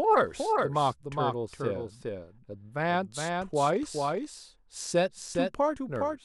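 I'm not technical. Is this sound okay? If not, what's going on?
No, there's a doubled audio track all the way through: a second, quieter copy trails about 0.4 seconds behind, likely from the sound being captured twice.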